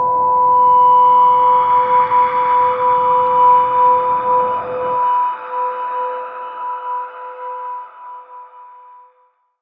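Nothing stood out on listening; the sound has the limited top end of call microphone processing, with nothing above 8 kHz.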